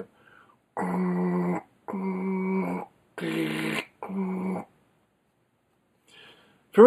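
One channel runs a fraction of a millisecond late, which fits a lag of a few samples, and summing to mono causes channel delay (comb filtering). Shared content cancels at evenly spaced frequencies from roughly 5 kHz upward, leaving the clip hollow and dulled on top.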